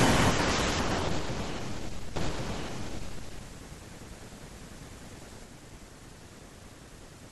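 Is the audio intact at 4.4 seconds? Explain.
No, at 4.4 seconds you're inside a doubled audio track that runs from 2.16 to 5.44 s. The speech there is heard twice: a second, full-band copy trails the original by about a second at roughly the same level, with no decay or room colour to it, and it cuts in and out abruptly at those edges. The likely cause is the same audio being picked up again through a slower path and mixed back in.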